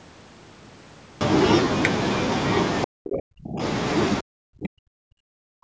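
From 2.85 s to 3.62 s the speech drops sharply, by about 40 dB at its deepest, over roughly 0.7 s. The same happens again from 4.21 s through the end of the clip, about 1.5 s affected. This is speech suppressed in double talk, likely caused by an echo canceller that could not tell the near talker from far-end echo and attenuated both, leaving the speech turned down.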